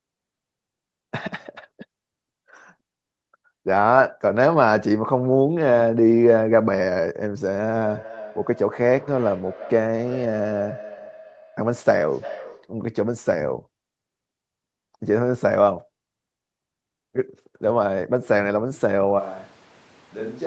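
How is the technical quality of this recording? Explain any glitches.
Two faults stand out in this speech recording: a feedback echo in the middle and a sudden change of microphone at the very end. The band stops at 8 kHz, consistent with call microphone processing.

From 7.62 to 12.8 s there is a feedback echo between two devices. Two devices on the same call sit in one room, so one device's loudspeaker replays what the other's microphone sent, and that microphone captures it again. Each echo canceller only removes its own playback, so the sound circulates. You hear each phrase return roughly every third of a second, thinner and more ringing, peaking at about 18 dB below the direct speech. On a waveform, smaller copies trail each burst at regular spacing. On a spectrogram, they appear as faint, narrowing repeats of each syllable.

From 19.21 s to the end, the sound abruptly turns roomy and hollow and loses bass. 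Its level falls by roughly ten decibels, and room noise rises to about 25 dB below the speech. This is likely a switch to a distant microphone, such as a camera's, after the close microphone dropped out. The waveform shows a sudden step down in amplitude with a thicker noise floor between phrases. The spectrogram shows weaker low frequencies and smeared, reverberant tails after each sound.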